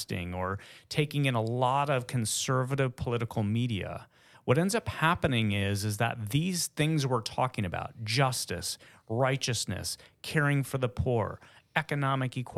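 No technical faults can be heard anywhere in this recording of speech, and the signal holds steady throughout.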